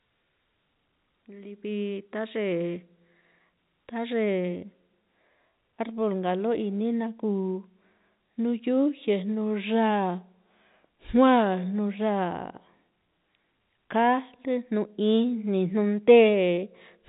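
No faults in this speech clip: it is carried as G.711 A-law telephone audio at 64 kbps, with the band stopping near 3.8 kHz.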